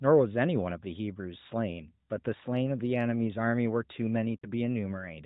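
Lost AMR speech frames occur from 4.38 to 4.46 s, a gap of about 40 ms, which fits two consecutive 20 ms frames failing their checksum. Instead of audio data, the decoder repeats the last good pitch and vocal tract settings at falling gain. The speech briefly smears and sags into a short warbling dip, then recovers weak or rough for a moment. Throughout, the narrowband mobile codec band-limits the sound at 4 kHz.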